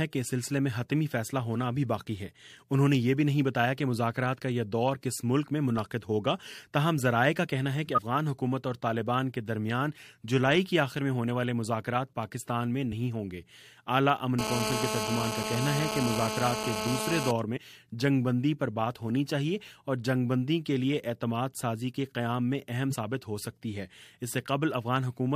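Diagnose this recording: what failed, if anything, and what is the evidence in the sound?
Compressed frames skipped, at the codec or storage stage. The audio jumps forward at 7.94–8.03 s, 12.91 s, 17.56–17.58 s and 22.90–22.96 s. Each jump drops roughly 50 ms of material, except the one at 12.91 s, which drops about 20 ms. These gaps point to whole frames that were missing or rejected by the decoder as damaged.

GSM phone buzz, picked up in the analogue wiring. From 14.39 s to 17.31 s a hard, raspy buzz sits over the sound, about 4 dB below the signal. Its pulse rate is 216.7 Hz, which is the 2G burst rate. It carries many harmonics and does not follow the audio. It is nearly steady, as it is during a call. The audio circuit rectified the phone's radio bursts and passed them through as sound.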